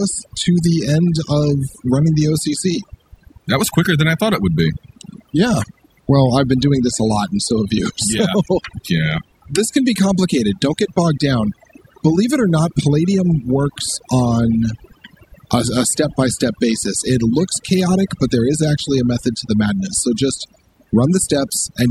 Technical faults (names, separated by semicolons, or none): overdone noise removal